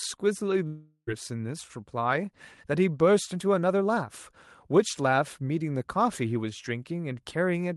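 From 0.67 to 1.09 s the sound smears into a fading buzz, drops to near silence for a moment, then picks up again with roughly 0.4 s simply gone. That's likely a long network dropout, with the receiver concealing the gap.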